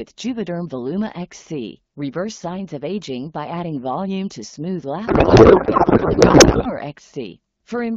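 From 5.07 s to 6.72 s the speech is replaced by garbled noise and warble that barely tracks it. This is a codec payload misread: the AMR-WB frames appear octet-aligned but are decoded as bandwidth-efficient, so every field lands in the wrong bit positions.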